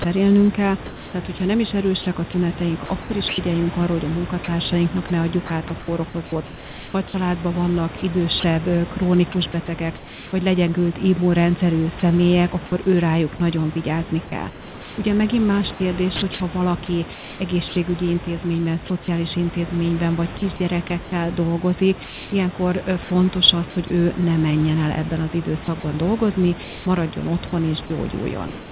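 From 0.02 to 10.32 s, before "vagy legyengült immunrendszerű", the speech is chopped by the voice detector, likely because the sender stopped transmitting during quieter moments. About 1.9 s of sound is replaced by synthetic comfort noise, so soft syllables and word edges vanish. The same thing happens from 12.0 to 19.08 s, ending at "intézményben vagy" (about 1.2 s replaced), from 20.38 to 23.9 s, ending at "ő ne menjen el" (0.6 s), and from 25.64 s to the end (0.62 s). Unlike packet loss, the gaps are filled with steady noise rather than silence, clicks or smeared repeats.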